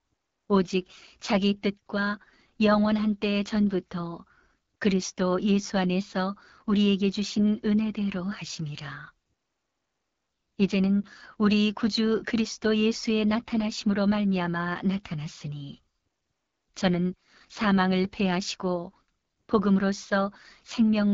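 AMR wideband (HD Voice) coding runs through the whole clip, and its damage is plainly audible. The codec models speech below 6.4 kHz as pulses driving a vocal tract filter and fills the band up to about 7 kHz with shaped noise. Nothing is heard above 7.5 kHz. The pronounced roughness and rasp fit one of the codec's lowest modes, around 8.85 kbit/s, where too few pulses are available to rebuild the excitation cleanly.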